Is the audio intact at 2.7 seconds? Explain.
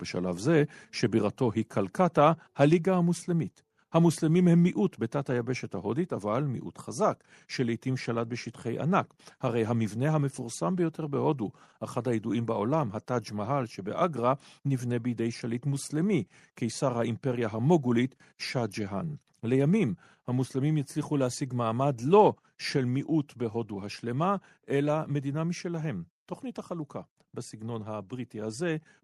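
No. At 2.73 s the speech and its background drop together by about 3 dB in a single step and stay lower, likely a microphone volume stepped down by the call software. Unlike a dropout, the sound continues, and unlike smooth gain riding, the drop is instant.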